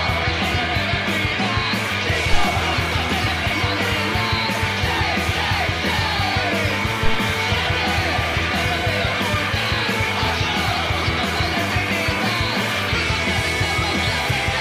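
A phantom power thump hits the audio at 2.33 s, a deep pulse peaking at about -5 dBFS. It comes from a supply switched on or off on a live input, its step passing through the coupling capacitors, and dies away in 35 ms. Handling noise would rumble unevenly rather than give one clean decaying pulse.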